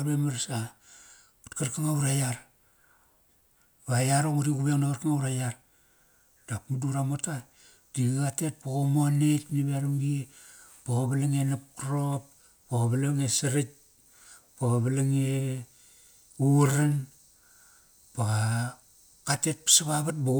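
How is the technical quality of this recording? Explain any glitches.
No technical faults or glitches can be heard here.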